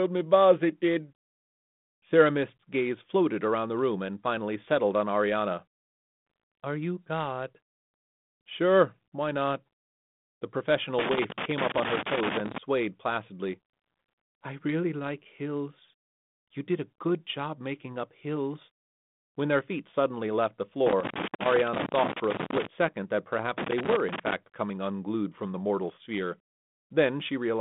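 A worn or dirty contact making and breaking produces loose connector crackle: irregular scratchy bursts that chop the speech from 10.99 to 12.58 s, from 20.87 to 22.67 s after "feet suddenly left the", and from 23.58 to 24.33 s between "second that" and "coming unglued from the", all over telephone-band audio that stops near 3.8 kHz.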